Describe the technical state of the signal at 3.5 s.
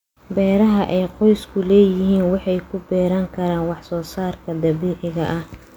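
At 3.5 s the speech signal is intact, with no audible fault at that moment.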